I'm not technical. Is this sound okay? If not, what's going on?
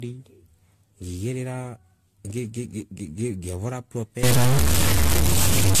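No. The whole recording sounds swirly, smeared and a bit hollow, and the sharp starts of sounds are blurred. This is likely generation loss: the speech was compressed and saved again about five times, and each round added a little more damage.

From 4.23 s to the end, a distortion appears, and the quiet gaps fill with noise. This points to a stuck bit. One piece of the digital data, likely from a faulty connection or converter, stops changing and throws many sample values off.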